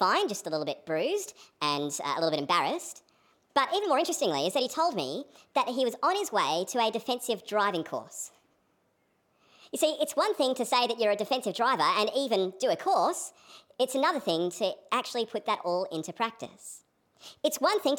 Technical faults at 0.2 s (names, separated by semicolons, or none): wrong sample rate